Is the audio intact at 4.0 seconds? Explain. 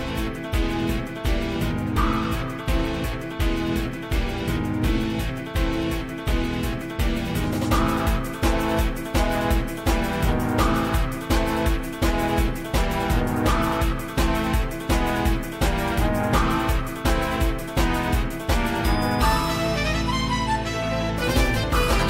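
Yes, the audio is intact at 4.0 seconds, with no dropout, click, distortion or other fault audible at that point.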